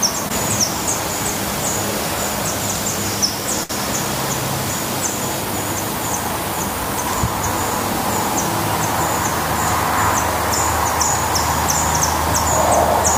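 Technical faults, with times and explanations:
3.63 to 3.71 s, short stall from a late packet: the sound is held for about 60 ms while awaiting the packet, then resumes where it left off. Nothing is skipped, unlike a dropout.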